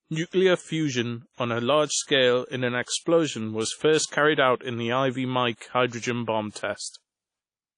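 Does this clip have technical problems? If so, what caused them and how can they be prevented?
Yes. Likely WMA compression at a low bitrate, which fits around 32 kbps, cuts everything above 10.1 kHz and leaves plainly audible ringing, washy hiss throughout the speech. Encode at a higher bitrate or keep an uncompressed master to prevent it.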